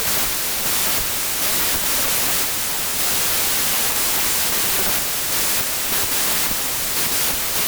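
Wrong sample width runs through the whole clip. The speech sounds like packed 24-bit samples read as 32-bit, so the byte groupings misalign and mostly produce loud noise. The buried speech plays about 1.33 times fast and correspondingly higher in pitch.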